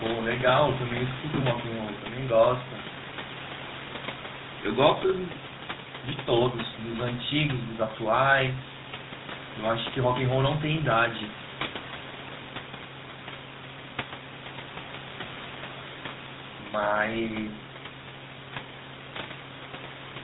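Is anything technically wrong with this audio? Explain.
Yes. For the whole clip the speech has passed through the GSM full-rate codec, and the damage is plainly audible. The codec rebuilds the voice from a vocal-tract model fed by a coarse pulse train that keeps only every third excitation sample, which fits the 13 kbps full-rate mode, and it discards everything above 4 kHz. The result is muffled, band-limited speech with a buzzy, gravelly roughness, while the room noise about 13 dB below the speech belongs to the recording itself.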